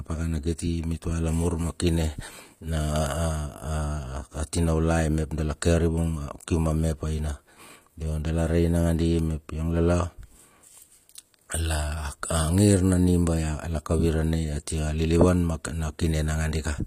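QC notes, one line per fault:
Throughout, HE-AAC compression: plainly audible damage, nothing above 15.4 kHz, gritty treble, likely from band replication copying lower bands upward, consistent with a bitrate near 24 kbps.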